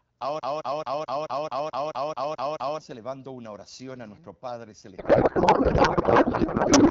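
From 0.40 s to 2.79 s a broken-record loop takes over: a 0.22 s fragment of speech repeats exactly, back to back, eleven times, most likely because the player or stream stalled. The speech that belonged there is lost. On a spectrogram it appears as identical blocks tiling at even intervals.

At 4.97 s a codec payload misread begins and runs to the end. The speech gives way to garbled noise and warble that barely tracks it. This fits octet-aligned AMR-WB frames being unpacked as bandwidth-efficient, with fields in the wrong places. The spectrogram loses its harmonic striations and shows smeared, irregular energy.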